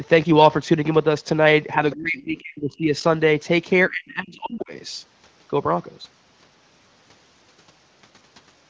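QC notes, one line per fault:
1.76–3.03 s and 3.89–4.72 s, speech suppressed in double talk: the speech sinks by about 30 dB in the first stretch and about 35 dB in the second, for roughly a second and under a second of lost level. This is likely an echo canceller turning down the near talker while the far side speaks at the same time. The waveform shows sudden notches, and the spectrogram shows harmonics fading to near-blank gaps.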